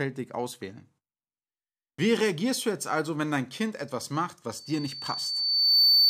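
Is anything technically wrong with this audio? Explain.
Yes. From 4.56 s, just after "etwas macht", to the end, loudspeaker feedback squeal: the microphone re-amplifies its own loudspeaker, so a 4.5 kHz tone swells over about a second and a half to roughly 10 dB above the speech.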